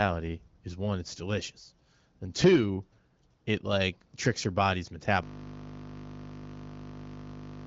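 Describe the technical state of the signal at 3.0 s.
At 3.0 s the speech is intact, carried by the AMR wideband (HD Voice) codec working as intended at a rate that keeps it clear, with content stopping below about 7.5 kHz as that wideband path allows.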